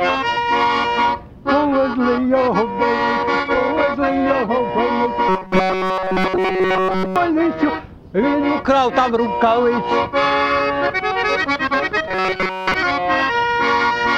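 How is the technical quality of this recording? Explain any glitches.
The recording has two stretches of robotic sound from repeated short buffers, from 5.29 to 7.16 s and from 12.08 to 12.74 s. In both the audio becomes a rigid, metallic buzz at 188 Hz. The whole first stretch is affected, and most of the second. The likely cause is a stream stalling while a slice of about 5.3 ms is replayed over and over. On a spectrogram this shows as evenly spaced harmonic stripes of 188 Hz. The waveform shows one short shape repeating.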